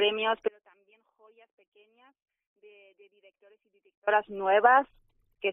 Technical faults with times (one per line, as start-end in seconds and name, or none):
0.48-4.07 audio dropout to a faint residue